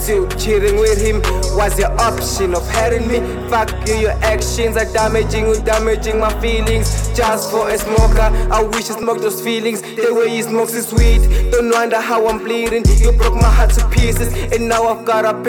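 At 4.39 s and again at 9.03 s there is a small forward jump in the sound, about 10 ms lost the first time and about 5 ms the second. Each is likely a dropped buffer (overrun), where samples were overwritten before being read and the edges butted together.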